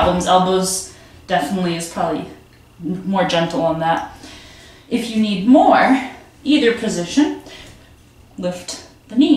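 No technical faults are audible.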